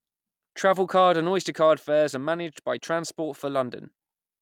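No technical faults can be heard anywhere in this short speech recording; the signal holds steady throughout.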